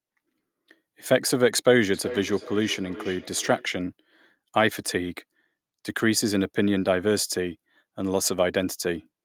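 From 1.94 to 3.75 s there is feedback echo between two devices. The sound returns at a steady interval of roughly 0.4 s, peaking about 14 dB below the speech. A second device in the room replays the call, and this microphone recaptures it.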